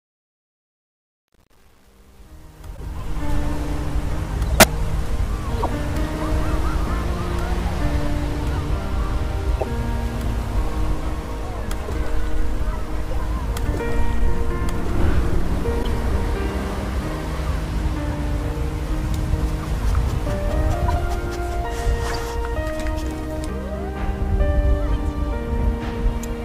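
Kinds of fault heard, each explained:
truncation distortion on a fade: the fade from the start to about 3.4 s keeps only 8 bits with no dither, so its quiet stretch turns gritty and stepped.
corrupt frame decoded: damaged compressed frames were played anyway, giving eight short chirps or noise bursts between 2.75 s and 22.1 s, the strongest near 4.5 s.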